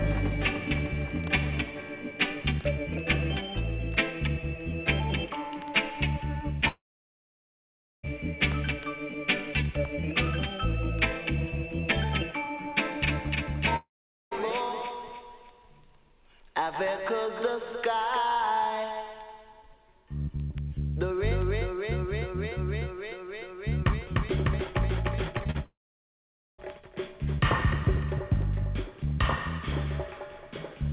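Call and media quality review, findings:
Long network dropout, 6.68–8.05 s: about 1.36 s of audio missing. A brief concealment buzz fades, then roughly 1.24 s of silence before audio resumes past the lost section. Likely jitter buffer underrun from a stalled stream.

Long network dropout, 13.76–14.33 s: about 0.56 s lost. The fill tail decays within roughly a tenth of a second, leaving about 0.44 s of silence. Likely the same receive-side starvation, playout skips ahead.

Repeated packet loss (robotic sound), 25.38–25.56 s: four short holes, the longest 37 ms, with nearly half the span synthesized. The result is choppy texture from back-to-back concealment on a narrowband path with nothing above 4 kHz, consistent with G.711.

Long network dropout, 25.64–26.60 s: immediately after the choppy burst, about 0.94 s missing. The concealment fades out, followed by roughly 0.83 s of silence. This suggests the loss burst escalated into a full outage.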